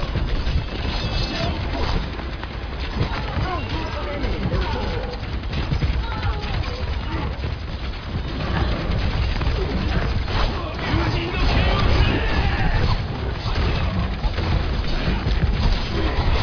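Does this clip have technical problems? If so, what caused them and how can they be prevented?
No, nothing in this clip points to a technical fault, so there is no cause to trace and nothing to prevent.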